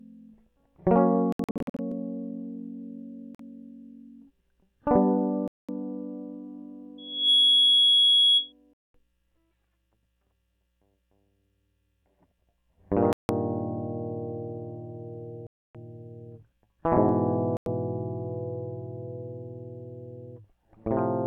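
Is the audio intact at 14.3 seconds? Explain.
Yes, the music is intact at 14.3 s, with no audible fault at that moment.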